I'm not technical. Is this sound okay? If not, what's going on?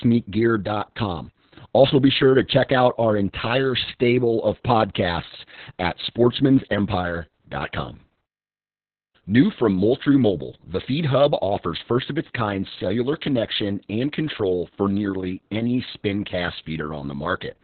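No. The whole clip has heavy Opus voice compression. The speech was squeezed into very little data, so everything above about 4.3 kHz is gone. Voices sound muffled, like an old phone line, and slightly hoarse and robotic from start to finish.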